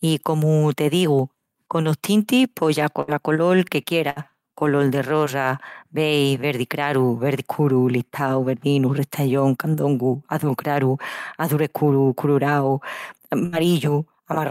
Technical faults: burst of packet loss

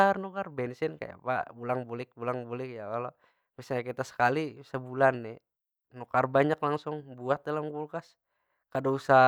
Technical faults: none

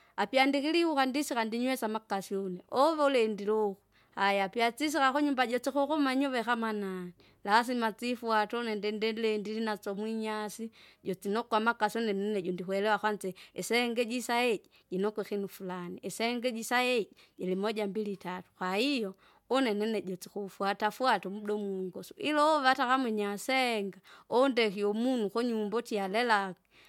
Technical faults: none

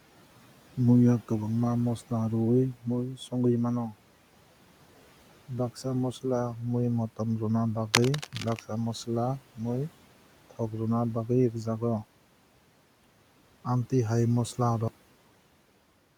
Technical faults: speech cut by the noise suppressor; cable scratch noise; cut-off end

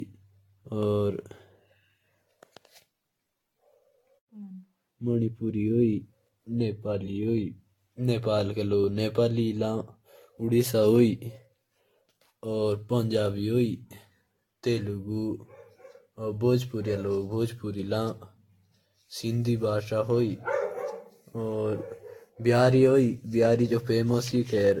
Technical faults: generation loss

